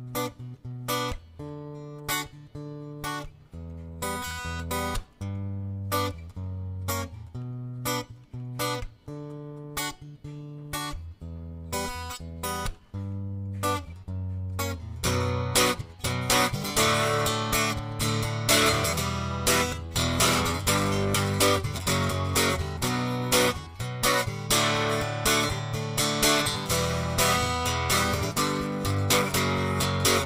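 No technical faults can be heard anywhere in this audio. There is nothing here that needs a timestamp or an explanation.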